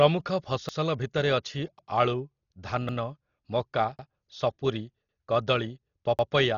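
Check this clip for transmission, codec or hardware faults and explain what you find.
Two faults are present: a heavily compressed, band-limited sound throughout, and a stutter that recurs roughly every 1.1 s.

Dolby Digital compression, throughout: the encoder was likely starved of bits, consistent with roughly 32 kbps. It cut the band so nothing survives above 7 kHz and left many frequency lines to be filled with dither noise. The speech sounds dull and muffled, with a rough, fluttering haze around voiced sounds.

Overlapping chunks, at 0.69, 1.79, 2.89, 3.99, 5.09 and 6.19 s: the audio was handled in 1-second chunks, each starting before the previous one ended. About 100 ms is played twice at every join, heard as a brief stutter or click. One falls just before "ସପୁରି କଦଳୀ", and the last just after it.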